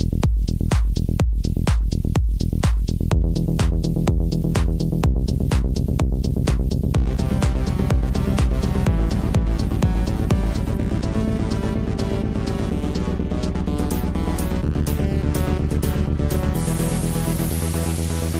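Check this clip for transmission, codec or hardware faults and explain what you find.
Nothing stood out on listening to this clip.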